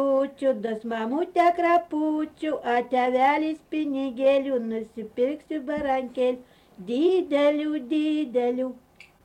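The audio jumps forward at 7.08 s as compressed frames are skipped, losing a couple of frames (about 50 ms).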